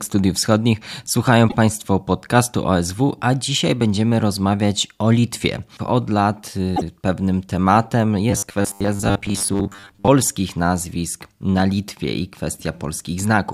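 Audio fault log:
1.48 s and 6.75 s: repeated frames. A 26 ms block, then a 52 ms block, plays twice, causing a brief stutter before "pewnym tematem".
8.31–10.09 s: robotic sound from repeated short buffers. Between "pewnym tematem" and "nazwisk na", speech becomes a rigid metallic buzz near 100 Hz, likely from 10 ms buffers looped while about half the audio is skipped.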